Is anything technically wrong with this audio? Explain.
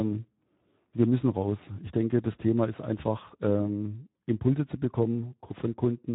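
Yes. Throughout the speech, the sound is plainly hoarse and noisy, with a gritty edge, and nothing is heard above 3.8 kHz. This is Speex codec damage: a CELP coder near 11 kbps leaves too few bits for the excitation and carries only a narrow band.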